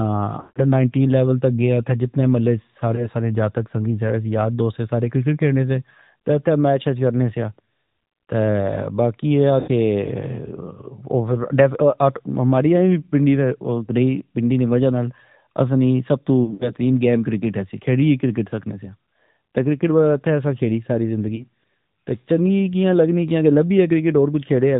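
The whole speech clip runs through the AMR narrowband mobile codec: everything above 4 kHz is gone, and there's a plainly audible buzzy, synthetic edge. That's the vocal-tract model working with a tight bit budget, which sounds like one of the higher modes, around 10 kbps.

There are lost AMR speech frames at 0.40–0.59 s, 2.96–3.09 s, 9.60–9.71 s, 16.44–16.72 s and 21.36–21.46 s. The decoder stretches the last good sound and fades it, so you hear a smeared drop-out, about 160 ms at the start and a single 20 ms frame at 2.96 s and 21.36 s.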